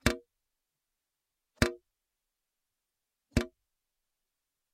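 No technical faults can be heard anywhere in the audio.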